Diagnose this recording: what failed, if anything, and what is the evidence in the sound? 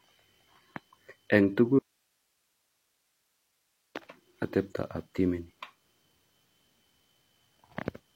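An audio dropout to a faint residue runs from 1.79 s to 3.95 s, about 2.2 s in all. The speech cuts off abruptly in mid-flow and returns just as suddenly, and the gap holds only hiss roughly 50 dB below the signal level. The hiss shows that the downstream path stayed live while the source was lost, which points to a likely break in the analogue wiring or connection ahead of the input stage.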